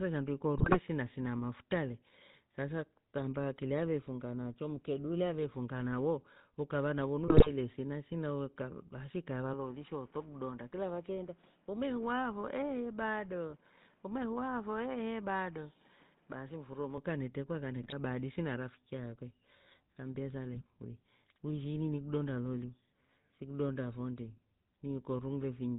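Speech run through the GSM full-rate codec the whole way, and you can plainly hear it. Everything above 4 kHz is gone, and there's that buzzy, gravelly texture from the codec rebuilding the voice from a vocal-tract model fed by a sparse pulse train, which fits the old 13 kbps full-rate coder. On top of that come GSM bit errors, short bursts of squawk and gargle where corrupted filter, pitch or gain values knock a few frames out of shape. They land at 0.58 to 0.78 s, 7.28 to 7.50 s, 13.49 to 13.55 s, 17.81 to 17.93 s right after "kanetrekwa kane" and before "hadisi na rafiki akwe", and 20.56 to 20.62 s just before "uwi ushi ini ni". The first two and the one at 17.8 s are the longest. Then from 9.53 s, right after "basi ikaeva", to 16.98 s, just before "kanetrekwa kane", the sound drops about 5 dB and goes duller and boxier, with nothing above 3.8 kHz and a new noise floor roughly 30 dB under the voice. 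There's no gap at either change, and it most likely comes from the input being switched to a poorer device, like a headset's call profile, and then back again.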